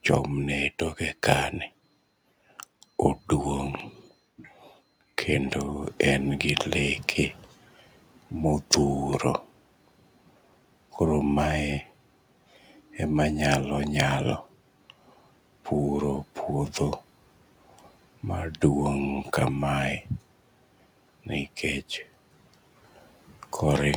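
At 3.75 to 3.82 s a loud pop cuts in. It is a double pop, two sharp clicks in quick succession. They peak around 10 dB above the speech, which carries on underneath. A sudden voltage pulse, likely from a plug, switch or static discharge, was added to the signal. The circuits after it shaped each pulse into a brief thump.

At 5.81 s the noise suppressor starts catching up. The room noise jumps by about 23 dB around 6 s. The suppressor's noise estimate lags behind this jump. So the noise first comes through with little reduction, sitting about 26 dB below the speech. Over 1.68 s the estimate adapts, and by 7.49 s the noise has sunk by about 9 dB.

At 8.71 to 8.78 s a second loud pop arrives, again a double. It is stronger, peaking around 15 dB above the speech. The speech continues beneath it.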